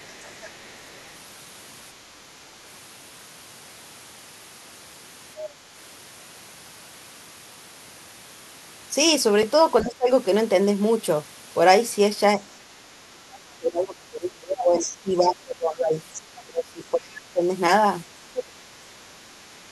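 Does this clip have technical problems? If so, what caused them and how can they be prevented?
Yes. There's other side's voice leaking through from 0.0 to 1.01 s, at 5.4, 14.8 and 16.15 to 16.41 s, faint at first and louder later. It's likely residual loudspeaker echo the canceller missed. A headset stops the far end reaching the mic.

The talker also gets speech suppressed in double talk at 9.82 to 10.09 s, 12.77 to 15.96 s, 16.44 to 17.44 s and 18.22 to 18.77 s, dipping by some 20 to 30 dB. The likely cause is the canceller ducking everything when both sides talk. A headset avoids this too.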